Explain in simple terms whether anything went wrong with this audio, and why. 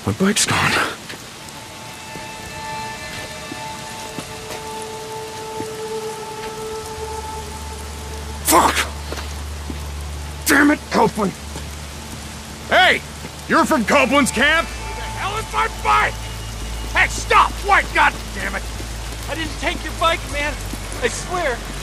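Nothing went wrong; no faults can be heard anywhere.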